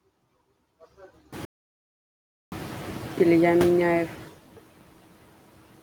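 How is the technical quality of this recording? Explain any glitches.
The recording has two technical faults: processing artefacts from a noise suppressor throughout, and one stretch where the audio drops to dead silence.

Noise suppressor artifacts run through the whole clip. The suppressor judges which frequency bands hold steady background noise and pulls them down by about 16 dB, frame by frame. The leftover noise dips between phrases and swells beneath the speech. These artefacts are more prominent after the gap, when the room noise jumps by about 22 dB and sits only about 14 dB below the speech.

An audio dropout to silence occurs from 1.45 to 2.52 s, losing about 1.07 s of speech. The input was most likely lost, through a disconnect, a failed link or a mute, while silence kept being written. The sound cuts off mid-flow into total silence, with no room tone underneath.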